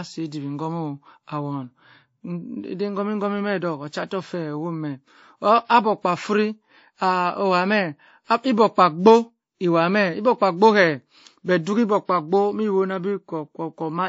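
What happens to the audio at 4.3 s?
At 4.3 s the speech sounds dull and smeared, with nothing above about 7.6 kHz and two different kinds of swirly, gritty artefacts layered together. This runs through the whole clip and fits transcoding between lossy codecs, likely a low-rate MP3 re-encoded to WMA.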